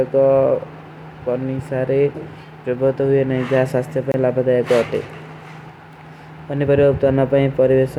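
A gap at a join of encoded pieces opens at 4.12 s and lasts about 24 ms, to 4.14 s. Separately encoded segments, joined every 6 s, were spliced untrimmed, so start-up delay and padding leave a short hole in the speech with smeared edges.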